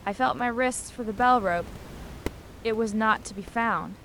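There are no technical faults in this speech clip, and the room noise sits about 17 dB below the speech.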